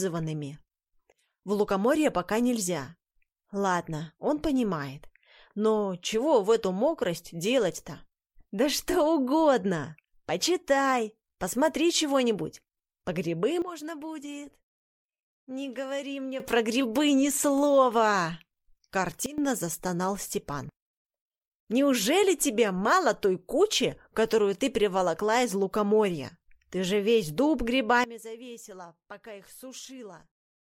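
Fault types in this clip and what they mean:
Sudden gain jump: at 13.62 to 16.4 s, 19.26 to 19.38 s, and from 28.04 s to the end, the level drops abruptly by about 12, 16 and 18 dB, with the background noise falling and recovering together with the sound. Because the whole signal steps down between adjacent samples rather than fading, this is likely a digital gain setting or bit shift applied without a ramp, and the brief dip lasts 0.12 s.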